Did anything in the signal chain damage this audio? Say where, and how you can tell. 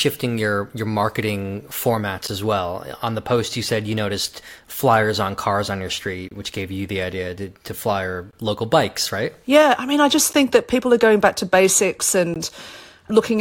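Yes, there's a gap between stream segments at the streaming or playback stage. Short, hard-edged silences cut the speech at 2.27 s, 6.29 to 6.31 s, 8.31 s (between "idea to to flyer" and "local bikes right"), 10.33 s and 12.34 s. They fall roughly every 2 s, so they track segment boundaries. The timestamps of adjacent segments don't quite meet, and the player fills each hole with silence, 8 to 26 ms of it. No audio is lost, just time inserted.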